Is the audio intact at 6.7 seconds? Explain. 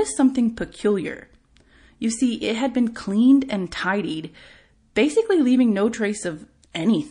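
No. From 6.72 to 6.75 s there is pre-echo: the encoder kept a long transform block, roughly 52 ms, instead of switching to short ones, so quantisation noise sized for a sharp attack spread about 28 ms ahead of it. That leaves a hiss about 12 dB up before the onset, which then sounds smeared.

This sits on MP3 compression running through the whole speech clip, likely from a low bitrate around 40 kbps. Short of bits, the encoder drops weak frequency lines, giving plainly audible watery, swirly damage and metallic edges on s sounds.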